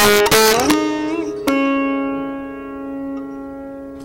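From the start to 0.74 s, loud peaks show integer overflow. The signal is driven about 6 dB past the largest value the integer format holds. Instead of being limited, each excess sample wraps to the opposite sign, producing violent cracks much sharper than clipping. The waveform shows peaks snapping from one rail to the other, and the spectrogram shows bright vertical broadband streaks. A single brief crack at 1.48 s, about 1 dB over, repeats the effect.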